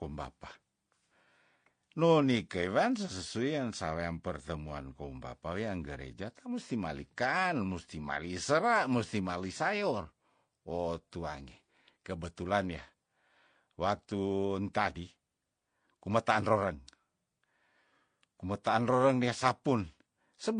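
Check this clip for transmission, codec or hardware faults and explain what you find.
One codec fault runs through the whole recording. Transcoding between lossy codecs is present throughout: nothing in the speech sounds above 9.8 kHz, and two kinds of coding damage overlap, the artefacts of the AAC encode heard together with those the MP3 encode added. The likely cause is a chain in which the second encoder spent its bits on the first encoder's artefacts and the lowest cut-off in the chain stayed, which fits a 32 kbit/s AAC-LC encode re-encoded to 64 kbit/s MP3.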